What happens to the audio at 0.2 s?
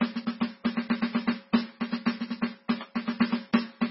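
At 0.2 s the music carries MP3 compression damage that runs through the whole clip. It likely comes from a starved encoder at a very low bitrate, around 16 kbps, which cuts everything above 5.6 kHz and drops weak lines frame to frame. The sound is heavy, watery and swirly. A spectrogram shows a flat ceiling at 5.6 kHz with flickering holes beneath it.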